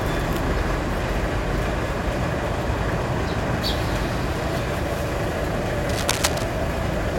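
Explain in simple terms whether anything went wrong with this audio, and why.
From 5.89 to 6.44 seconds, a burst of rough, uneven scratching and rustling sits fairly loudly over the sound. This is cable scratch noise, likely from a worn cable or connector being moved, so its electrical contact flickered and added crackle.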